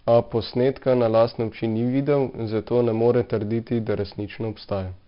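From start to end the speech carries heavy 4-bit ADPCM compression damage: each sample is coded as a coarse step from a prediction, leaving gritty hiss that tracks loud syllables and rough attacks. Nothing sounds above about 5.3 kHz, which fits a low-rate stream near 44 kbps.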